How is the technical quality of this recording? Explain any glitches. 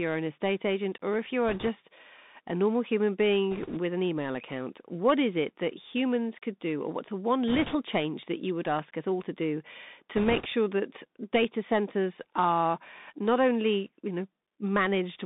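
The quality is poor: the whole speech clip is squeezed through a narrowband Bluetooth headset path, and four short bursts of crackle break into it.

The Bluetooth CVSD headset codec runs throughout. Everything sits between about 150 Hz and 3.7 kHz, which fits a 64 kbps CVSD link. Each sample is coded as a single up-or-down step, so fast, loud high sounds outrun the step size. Sibilants turn scratchy and a granular hiss rides under the speech. That hiss is constant, unlike the bursts.

Bit errors on a Bluetooth voice link occur at 1.48 to 1.69 s, after "agent or if you"; at 3.51 to 3.79 s, between "a normal human" and "an email account what"; at 7.48 to 7.76 s, between "or what's a one" and "change that you would"; and at 10.16 to 10.46 s. Flipped bits each nudge the waveform only slightly, and the error fades quickly. The result is a rushing crackle, with no sharp clicks or dropouts. The bit error rate runs at a few percent and is heaviest in the last burst.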